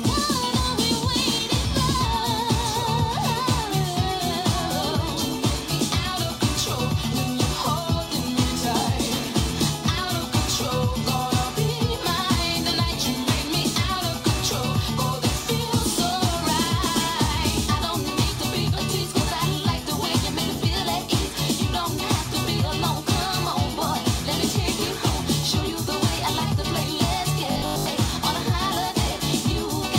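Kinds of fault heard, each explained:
Robotic sound from repeated short buffers: from 27.52 to 27.86 s the sound turns into a rigid 50 Hz metallic buzz, likely from a 20 ms chunk looping through most of that stretch.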